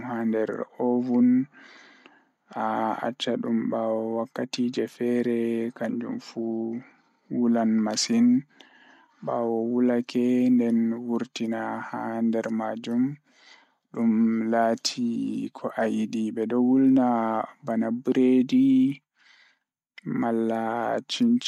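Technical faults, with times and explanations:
Listening through this speech recording, nothing stood out as a technical problem.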